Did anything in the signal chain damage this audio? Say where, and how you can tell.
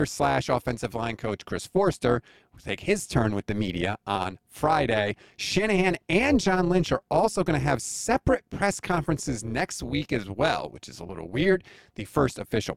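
Yes. Overlap-add ripple runs through the whole speech clip: the level swings by about 11 dB around 200 times a second, giving a metallic buzz with extra tones around each note. A frame-based processing stage resynthesised the audio with windows whose overlap doesn't sum to constant gain.

Compressed frames are skipped at 11.08 s. The speech jumps forward by about 20 ms. That points to the decoder dropping several missing or damaged frames.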